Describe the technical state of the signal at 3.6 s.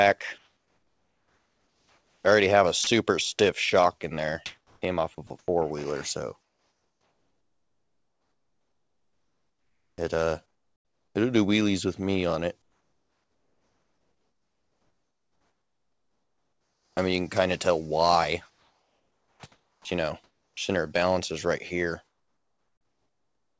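At 3.6 s the audio is intact, with nothing present above 8 kHz as expected from a wideband call path, which fits a G.722-style codec.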